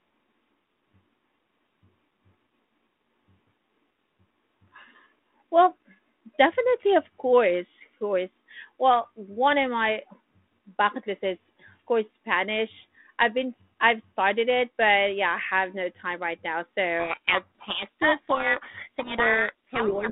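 After "no time right now", from 17.0 s to the end, harsh distortion buries the speech: a codec payload misread, with G.726 code words decoded in the wrong bit order.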